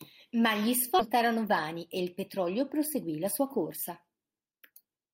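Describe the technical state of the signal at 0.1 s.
At 0.1 s the speech signal is intact, with no audible technical fault at that moment.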